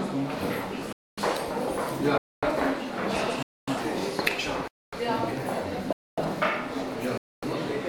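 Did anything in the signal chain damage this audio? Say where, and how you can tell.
Yes. The chunked delivery stage, in buffering or playback, left a gap between chunks: silence inserted at every join between roughly one-second blocks. Holes of 0.25 s begin at 0.93, 2.18, 3.43, 4.68, 5.93 and 7.18 s, recurring every 1.25 s. Each has abrupt edges, and the sound on either side resumes intact, so nothing is lost. The audio is pushed apart at each join, which matches a player starting each chunk late or padding between blocks.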